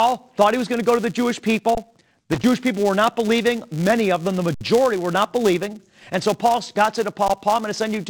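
A buzz at 200 Hz runs through the whole clip. This is a filter restarted on every block: the filter drops its internal state at each block boundary and starts from silence, so every block opens with a small transient. The ticks arrive every 5 ms, which fuses into a buzz whose loudness rises and falls with the signal. On a spectrogram it shows as harmonics stacked at multiples of 200 Hz. The waveform carries a faint, regular spike at each boundary.

From 1.75 to 1.77 s there is an underrun with held sample. The output buffer empties for about 21 ms, which fits a gap of 1024 samples, and the converter holds its last value. The sound stops abruptly with almost no click. Playback then resumes where it left off, so the restart is soft. The waveform shows a flat, level line that usually sits off zero. The spectrogram shows a narrow vertical blank strip.

Between 2.32 and 2.44 s comes loose connector crackle. 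A worn or dirty contact makes and breaks rapidly, chopping the signal into an irregular burst of scratching. On the waveform this appears as ragged dropouts and spikes. On the spectrogram it shows as scattered broadband vertical streaks.

The held-sample underrun returns from 4.54 to 4.61 s, this time lasting 64 ms. Its flat stretch is longer and more clearly visible, and the sound again resumes softly. A brief one at 7.28 s lasts about 14 ms.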